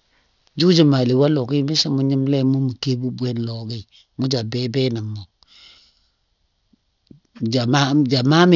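Speech throughout, with aliasing: the sample rate was lowered without an anti-alias filter, consistent with about 12 kHz, so content above 6 kHz folds back as gritty, metallic sibilance roughly 15 dB below the signal.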